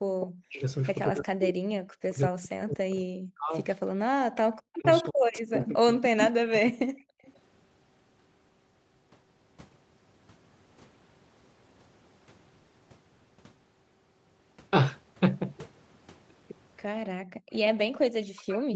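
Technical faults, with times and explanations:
0.0–3.53 s, 4.09–7.25 s and 17.79 s to the end: speech suppressed in double talk. The speech sinks by roughly 40 dB, thinning and breaking into pieces for about three seconds in each of the first two stretches. This is likely the echo canceller turning down the near talker while the far side also spoke.
0.2 s, 5.03–5.68 s, 7.25–7.39 s and 17.52–17.58 s: echo leak. A delayed copy of the speech trails the original by about 230 to 280 ms, at about 10 dB below the speech at first and about 30 dB below by the end. It is likely loudspeaker sound that the far end's canceller failed to remove and sent back.
17.06–17.51 s: background gated by the echo canceller. The room sound drops away by about 40 dB for roughly 400 ms, then returns. The canceller clamped the microphone hard while the loudspeaker played and released it afterwards.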